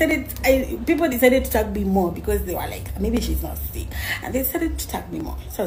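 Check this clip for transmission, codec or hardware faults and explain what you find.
One hardware fault is present: periodic USB or driver dropouts, from 0.11 s to 5.2 s, repeating every 1.02 s. Each time a blocked bus or driver skips about a millisecond of audio, causing regular ticks. The waveform shows discontinuities, and the spectrogram shows evenly spaced vertical lines.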